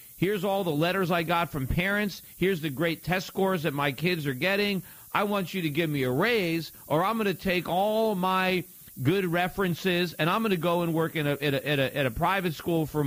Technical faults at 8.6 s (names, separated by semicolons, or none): low bit depth with noise shaping